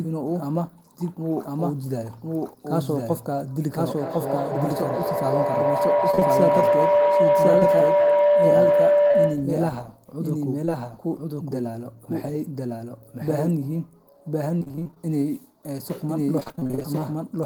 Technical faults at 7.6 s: doubled audio track; feedback howl; short concealed packet loss

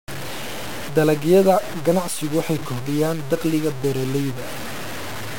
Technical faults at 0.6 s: low bit depth without dither

